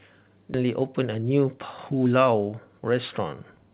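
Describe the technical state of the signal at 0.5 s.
A skip ahead sits at 0.54 to 0.56 s: roughly 0.7 s of speech never reaches the listener, most likely because the jitter buffer overflowed and discarded audio while later packets were already queued. Playback jumps straight to the newer audio with no filler and no audible pause, so the sound on either side of the cut is spliced almost directly, and a chunk of the utterance is simply missing. The band-limited call audio, with nothing above 4 kHz, fits a narrowband G.711 link.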